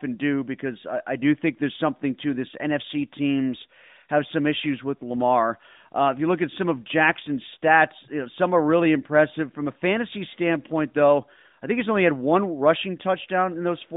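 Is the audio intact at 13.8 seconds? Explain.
Yes, the audio is intact at 13.8 seconds, with no fault at that moment beyond the narrow 150 Hz to 3.7 kHz band of the AMR-NB mobile codec carrying the whole clip.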